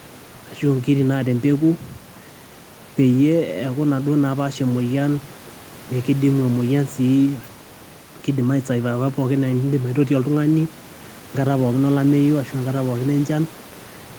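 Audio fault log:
Nothing stood out on listening; the faint room noise, about 21 dB below the speech, belongs to the recording space rather than the system.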